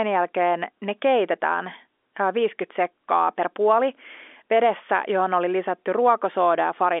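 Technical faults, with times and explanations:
No technical faults, with times and explanations, are present here; the telephone coding heard throughout is working normally, with nothing above 3.7 kHz.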